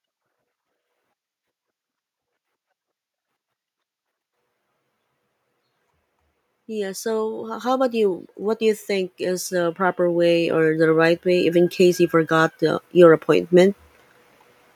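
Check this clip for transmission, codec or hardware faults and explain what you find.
Automatic gain rising runs from 6.53 s to 13.79 s. The gain control judged the incoming speech too quiet and kept raising its amplification in small steps rather than all at once, lifting the level by about 16 dB over those seven seconds. You hear the voice grow steadily louder. The background noise floor swells up right along with it, because the gain acts on the whole signal, not just the talker.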